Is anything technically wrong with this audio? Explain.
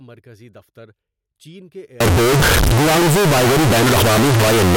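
Yes. From 2.00 s, right after "دفتر چین کے", to the end, the speech turns into very loud, harsh distortion. Quiet moments blast as loud as the rest. The likely cause is signed and unsigned mixed up: flipping the top bit of what sounds like 16-bit samples turns each zero crossing into a full-range jump.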